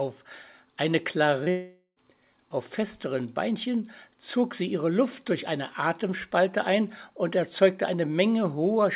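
At 1.44 s, a short concealed packet loss: roughly 20 ms of audio failed to reach the decoder in time, so the receiver extended the preceding sound for about 23 ms to cover the gap before rejoining the real signal at 1.48 s. The result is a brief smear or wobble, with whatever fell in that sliver simply gone. The band-limited character here, with nothing above 4 kHz, fits a G.711 A-law call path at 64 kbps.

From 1.50 s to 1.98 s comes what is likely a long network dropout: around 460 ms of audio never arrived. The receiver kept the last sound going as a decaying buzz or hiss for most of that stretch, and roughly the final 90 ms falls to silence before the audio returns at 1.98 s, picking up further along without the missing part.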